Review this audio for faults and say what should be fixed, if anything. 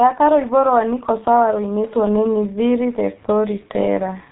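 The speech runs through the G.723.1 codec from start to finish. Nothing passes above 3.8 kHz, so it sounds muffled. The damage is heavy, with a hoarse tone and smeared consonants. This fits a rate near 6.3 kbit/s with long frames and a slowly updated voice model. To prevent it, record or transmit through a wideband codec at a higher bitrate instead of G.723.1.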